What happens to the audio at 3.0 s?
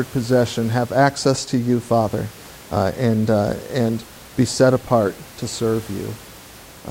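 Nothing goes wrong at 3.0 s: the speech continues intact, with only the room's own background noise audible beneath it, about 22 dB lower.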